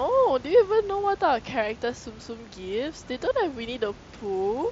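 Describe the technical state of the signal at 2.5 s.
At 2.5 s the speech is intact, with no fault at that moment; the quiet room noise about 21 dB below the speech and the band-limited sound of the mSBC Bluetooth headset link are both part of the normal signal path.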